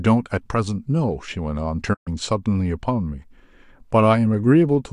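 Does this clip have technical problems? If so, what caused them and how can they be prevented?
Yes. From 0.77 to 3.07 s there is channel delay (comb filtering): one channel runs about one sample late, roughly 0.02 ms, and summing to mono cancels the shared content at a notch near 20 kHz, dulling the top end of the speech. Time-aligning channels before any mono fold-down prevents this.

A digital broadcast dropout cuts the sound from 1.93 to 2.09 s. The audio fades out over 20 ms into a 120 ms silence, which fits a run of several corrupted frames that the receiver muted until clean data returned. Stronger reception and more robust error protection prevent it.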